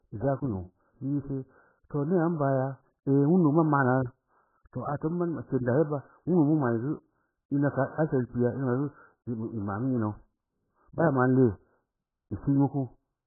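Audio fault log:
Throughout, AAC compression: the speech sounds dull, muffled and smeared, with nothing above about 1.7 kHz, so sibilants lose their edge and sustained vowels take on a watery, warbling texture. The likely cause is heavy AAC-LC coding at a very low bitrate, which fits roughly 8 kbps. With so few bits, the encoder drops the upper band entirely and quantises what remains so coarsely that shifting artefacts appear from frame to frame.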